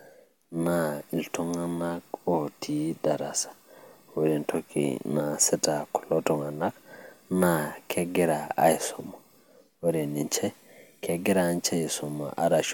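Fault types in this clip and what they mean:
No technical faults can be heard anywhere in this speech recording. Nothing in it calls for a listing of fault types.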